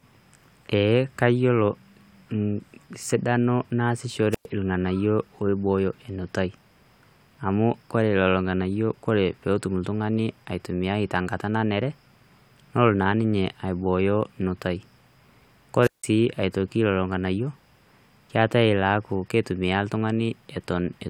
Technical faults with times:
4.31-4.46 wireless microphone squelch dropout
15.80-16.07 wireless microphone squelch dropout

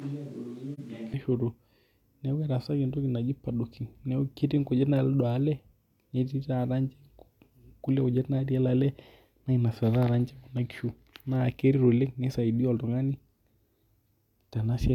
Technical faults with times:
0.00-1.13 switch to a distant microphone
0.74-0.80 AAC frame loss with muting

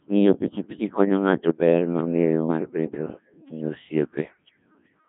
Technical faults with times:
0.00-5.08 Codec 2 vocoder

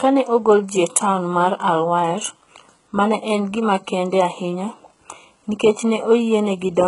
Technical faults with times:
0.00-6.87 HE-AAC compression

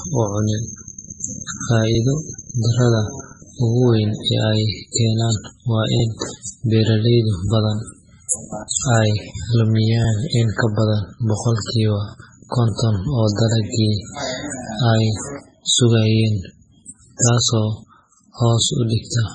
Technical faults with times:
0.00-19.35 MP3 compression

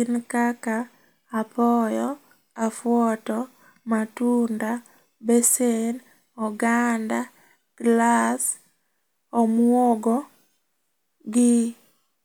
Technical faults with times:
none

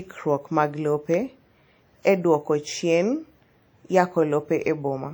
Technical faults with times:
0.00-5.14 WMA compression

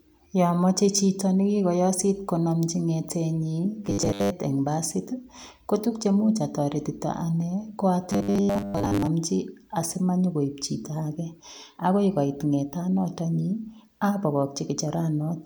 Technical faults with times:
3.85-4.30 robotic sound from repeated short buffers
8.10-9.07 robotic sound from repeated short buffers

